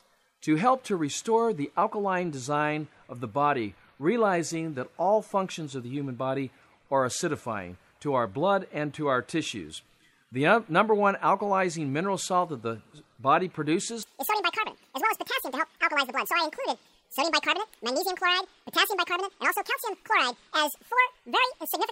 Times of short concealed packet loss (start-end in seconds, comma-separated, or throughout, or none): none